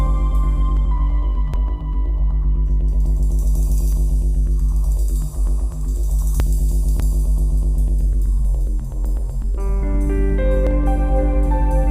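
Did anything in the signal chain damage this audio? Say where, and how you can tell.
Yes. There are seven abrupt splices, at 0.77, 1.54, 3.93, 6.4, 7.0, 8.45 and 10.67 s. Each is a sudden jump forward in the sound, with no gap of silence. Most skip about a tenth of a second. The one at 1.54 s skips a bit more, and the one at 6.4 s skips nearly a third of a second. The likely cause is a dropped buffer (overrun) at the driver or buffer stage. Samples were overwritten before being read, and the surviving audio was butted together.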